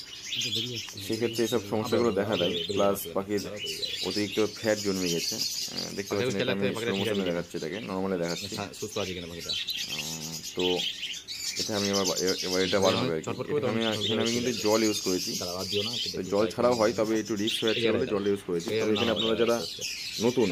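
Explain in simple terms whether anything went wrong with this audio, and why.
Nothing went wrong with this audio. At no point does the sound do anything that would signal a problem in how it was recorded, sent or played back.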